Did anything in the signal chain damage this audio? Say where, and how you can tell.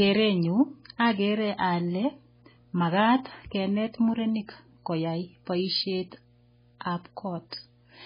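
Yes. Mains hum sits under the speech for the whole clip, a steady 60 Hz tone roughly 35 dB below the signal. That points to the analogue wiring stage, where a ground loop or nearby transformer couples the power line into the signal path.

The speech also carries MP3 compression damage throughout, likely from a very low-bitrate encode around 16 kbps. Nothing remains above 5 kHz, and the heavy damage shows as a watery, swirling texture with smeared consonant attacks as weak frequency lines drop in and out.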